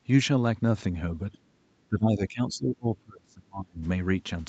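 From 1.33 to 1.38 s, a brief trace of the other side's voice leaking through sits far beneath the speech, roughly 35 dB down. Its likely cause is loudspeaker playback reaching the microphone that the echo canceller did not fully remove, leaving only a faint scrap.

Over that same 1.33 to 1.38 s span, the speech dips by around 10 dB, consistent with speech suppressed in double talk. With both sides active, the canceller cannot separate its own talker from the echo and attenuates both. From 1.89 to 3.85 s this happens more severely, with drops approaching 30 dB and roughly a second and a half of the speech audibly cut down or broken up.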